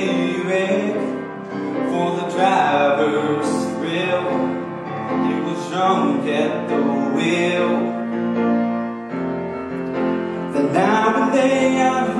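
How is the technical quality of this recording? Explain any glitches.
No glitches turn up anywhere in the recording, so there's nothing here that needs explaining.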